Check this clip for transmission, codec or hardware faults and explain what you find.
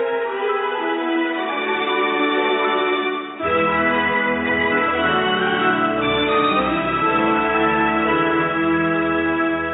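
Nothing stood out on listening to the clip.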